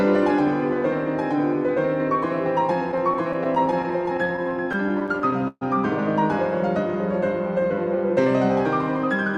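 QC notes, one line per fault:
2.91–5.63 s, repeated stalls (stutter): 24 brief gaps, the longest about 134 ms, filled by stretching the preceding sound as packets arrived late; nothing lost, but it drags.
7.60–8.26 s, jitter buffer slow-down: pitch periods repeated to rebuild the buffer, adding 38 ms and running at 95% speed, so sounds stretch at unchanged pitch.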